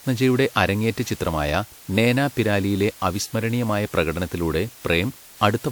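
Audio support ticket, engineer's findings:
Low bit depth with dither across the whole clip: word length reduced to what fits 8 bits, dither added before rounding. The quantisation error becomes a constant, even hiss roughly 25 dB below the speech, with no grit or distortion on the speech.

Generation loss throughout, likely from repeated lossy transcoding, consistent with a WMA chain near 96 kbit/s run around seven times. Each pass re-quantises on a shifted frame grid, so the speech sounds swirly, smeared and hollow, with blurred attacks. Band still extends to about 20.1 kHz.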